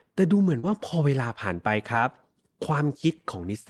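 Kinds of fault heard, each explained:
Short concealed packet loss: around 0.59 to 0.65 s about 40 ms never arrived, and the decoder extended the preceding sound to bridge it, leaving a brief smear.
Lost packet rebuilt from error correction: from 0.63 to 0.81 s separate lost packets were replaced by low-bitrate redundant copies, so that stretch sounds rougher and noisier without any gap.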